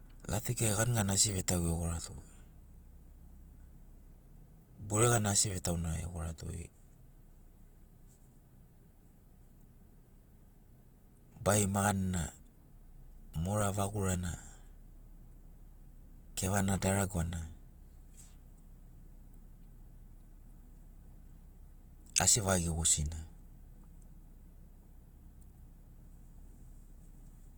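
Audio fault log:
Throughout: Opus compression. The speech sounds rough and grainy across the whole clip. The damage is plainly audible. Bands are not cut out, so there is little swirling. Instead the tones themselves turn noisy. This is likely the codec's music mode spending too few bits and filling bands with folded or noise-like content. The roughness fits a low bitrate of around 24 kbps. The bandwidth stays full, with content reaching about 20.1 kHz.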